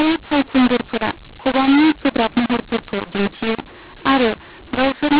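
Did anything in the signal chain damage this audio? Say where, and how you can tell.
Yes. The damage sits at the codec stage, throughout the speech. The signal was encoded as A-law but decoded as mu-law, a mu-law and A-law mix-up. Levels come out scrambled. Speech sounds harsh and distorted. Pauses fill with noise because the quietest samples are lifted above silence.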